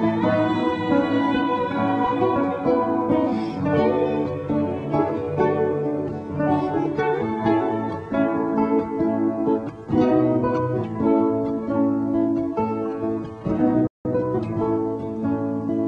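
A playback stall runs from 13.87 to 14.05 s: the sound stops mid-flow for about 178 ms of silence. The likely cause is the player running short of data, or its output thread being held up, so nothing reached the output until it recovered.

Time-compressed catch-up follows from 14.05 to 14.39 s. The player trims its backlog by cutting out small pieces and cross-fading the remainder, so the audio rushes ahead at 1.5 times normal speed while keeping its pitch.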